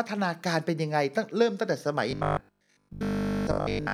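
From 2.11 s to the end, audio likely arrived too slowly, so 20 ms buffers repeated, causing robotic sound from repeated short buffers: a rigid, metallic 50 Hz buzz.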